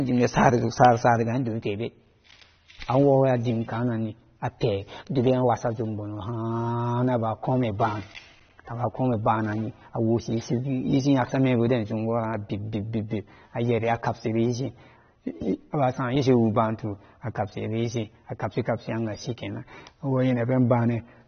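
From start to finish, the speech has nothing above 6.3 kHz, so sibilants and breath lose their top end and the whole clip sounds dull. The damage is plainly audible and goes beyond the missing treble, which points to AAC compression, likely AAC-LC at a low bitrate of around 24 kbps. A simple low-pass filter would remove the same top octave but leave what remains clean, without the coding damage heard here.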